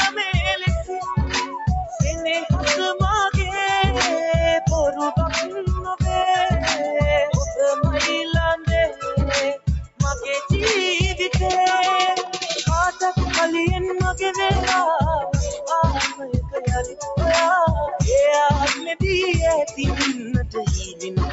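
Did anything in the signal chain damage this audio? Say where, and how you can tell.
Yes. The call-processing stage left a speech noise suppressor engaged on this sound. It treats sustained tones, ambience and tails as noise, so the gain swings by around 5 dB throughout: attacks pass while held material pumps and thins.

The same suppressor turned the sound down further at 0.1–1.58 s (about 14 dB), 5.45–5.61 s (about 6 dB), 8.57–10.0 s (about 20 dB), 15.61–17.04 s (about 11 dB), 18.75–18.93 s (about 7 dB) and 19.65 s onward (about 12 dB). Decays sink or end early.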